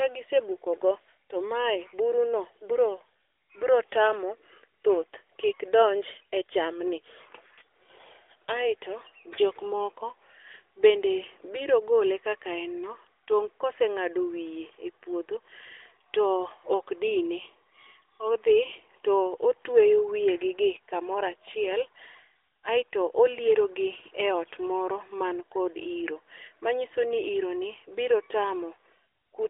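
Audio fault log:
Nothing stood out on listening to this speech.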